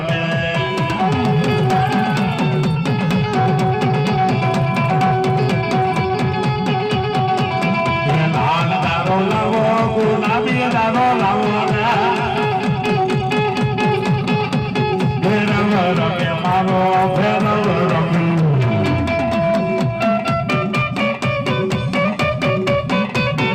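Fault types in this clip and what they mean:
No audible faults detected.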